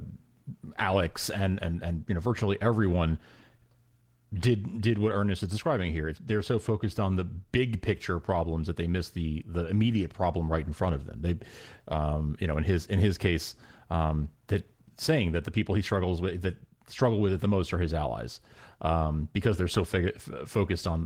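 A speech recording in which no technical fault can be heard anywhere in the signal.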